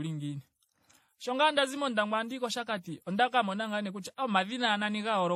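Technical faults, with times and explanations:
Throughout: transcoding between lossy codecs. The speech carries layered artefacts: several kinds of codec artefact heard together, with nothing above 16.3 kHz. This likely comes from a low-rate MP3 and HE-AAC pass followed by WMA, each adding its own errors.
0.16 to 5.21 s: clock slip clicks. Faint regular ticks recur roughly every 0.15 s, around forty in all, clearest on sustained sounds. This is likely two unsynchronised clocks about 150 ppm apart, dropping or repeating one sample each time.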